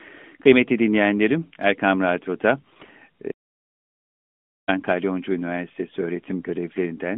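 From 2.60 to 2.91 s you get AMR bit errors: the less-protected bits in roughly fifteen 20 ms frames came through flipped, around one in ten, so pulse positions and the fine pitch, gain and spectral values go wrong. Pitch and level hold roughly steady, but the speech turns hoarse, scratchy and gargly.

Then from 3.32 to 4.68 s there's an audio dropout to silence lasting about 1.36 s. The signal cuts to silence with no room tone, and whatever was said in that stretch is simply gone, likely from the input being lost and the recorder writing silence until it came back.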